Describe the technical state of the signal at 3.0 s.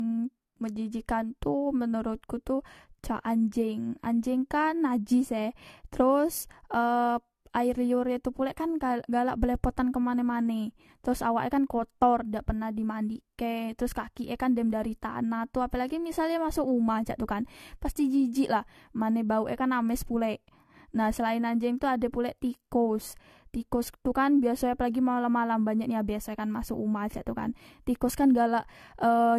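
At 3.0 s the speech carries generation loss, present across the whole clip rather than just this moment. It sounds swirly, hollow and smeared, with consonant attacks blurred. This is likely the result of repeated lossy re-encoding, around four passes of AAC-LC at a rate that points to 64 kbit/s, each requantising on a shifted frame grid so noise and gaps accumulate. A spectrogram shows nothing above 14.1 kHz, patchy holes below that, and onsets smeared in time.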